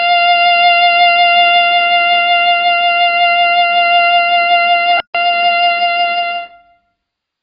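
From the start and throughout the music, AAC compression is audible: nothing reaches above 5.2 kHz, and the remaining band is heavily damaged, with a smeared, warbling, fizzy texture on sustained tones. A plain low-pass filter would simply sound dull and clean; this watery artefact comes from the coder quantising its frequency lines too coarsely. The likely cause is AAC-LC encoding at a very low rate, around 16 kbps.

At 5.00 s the music cuts to silence for about 144 ms, until 5.15 s. That is a playback stall, likely the player running short of data or being briefly blocked, so output halts in mid-flow. It differs from a click or a single lost frame because the gap is long enough to hear as a distinct hole. It also differs from the coding damage, which smears the sound rather than stopping it.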